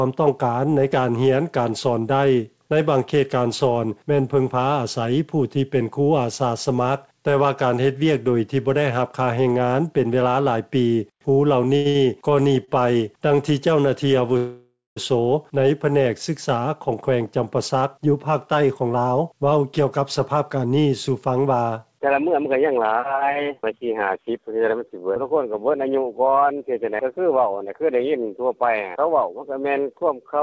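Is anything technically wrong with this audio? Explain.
Yes. The audio, carried over a G.722 call path with nothing above 8 kHz, has three kinds of jitter-buffer fault.

At 11.76 s, 11.89 s and 12.65 s, short stalls from a late packet hold a sound for 91, 56 and 29 ms while the buffer waits, giving brief drawn-out dips.

From 14.37 to 14.98 s a call audio freeze inserts about 0.6 s: the last sound buzzes and fades into roughly 0.21 s of silence, likely from packets delayed in transit.

From 16.56 to 23.81 s a jitter buffer speed-up trims pitch-period slices, about half a second in total, so the audio runs 8% fast at unchanged pitch.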